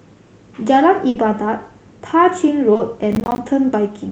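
Right around 1.09 s there's a burst of packet loss, running to about 1.17 s. The receiver kept the last sound going and faded it down for about 60 ms, so you get a held, dimming tail, and then the speech picks up further along with about 60 ms simply gone.

At 2.73 s you'll catch short concealed packet loss, two 20 ms holes back to back, ending at 2.81 s. The decoder patched each by extending what came before and blending back in, so it comes across as a quick smear or wobble.

From 3.11 to 3.38 s there's processor overload crackle. The processor kept missing its deadlines, each miss leaving a tiny hard-edged silent gap, and a dozen or more of them in a row, which fits buffers of around 10 ms, stack up into a gritty tearing over the speech.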